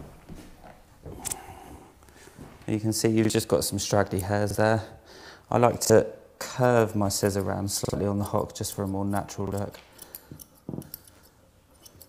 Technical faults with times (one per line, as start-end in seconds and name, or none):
1.30-1.35 repeated buffer
3.25-3.30 repeated buffer
4.50-4.55 repeated buffer
5.85-5.90 repeated buffer
7.85-7.94 repeated buffer
9.47-9.52 repeated buffer
10.73-10.82 repeated buffer